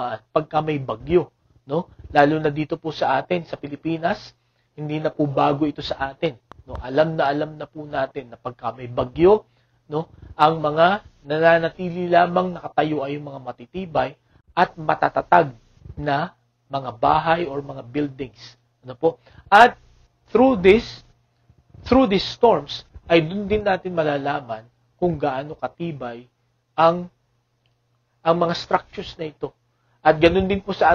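Train of clicks from 6.26 to 7.27 s: about five evenly spaced pops, four per second, near the sound's level, likely electrical interference injecting pulses.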